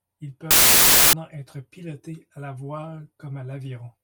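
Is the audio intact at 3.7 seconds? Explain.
Yes, at 3.7 seconds the speech plays through intact, with no audible fault at that moment.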